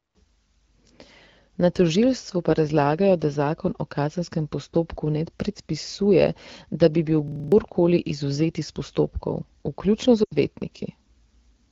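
At 7.28 s a system hang loop begins. The driver stalled while the hardware kept replaying one 40 ms stretch of its buffer, six times over until 7.52 s. It sounds like a rough 25 Hz buzzing stutter, and about a fifth of a second of real audio is lost. A waveform shows identical repeated blocks, and a spectrogram shows vertical striping at 40 ms spacing.

At 10.23 s lost AMR speech frames interrupt the wideband call audio. About 80 ms went missing, which fits four frames, and the decoder stretched the last good sound while fading it until 10.36 s. The result is a brief smeared, sinking dip. On a spectrogram, flattened harmonics fade to a gap.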